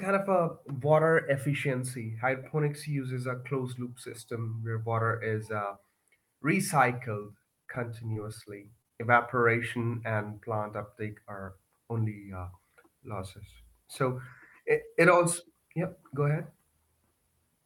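Repeated packet loss (robotic sound) breaks up this speech clip from 7.22 to 8.92 s. Across that stretch, pieces of the signal arrive too late or not at all, and each hole is patched by extending the sound just before it. The gaps come in quick succession, the longest about 29 ms, and concealment covers about 9% of the span, roughly 159 ms in total. That chain of stretched fragments makes the passage choppy and robotic.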